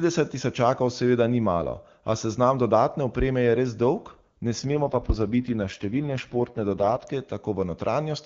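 From 4.59 to 7.08 s the speech turns rough, raspy and synthetic, an AMR rate drop from 23.85 to 6.6 kbit/s, with no gap or narrowing of the band.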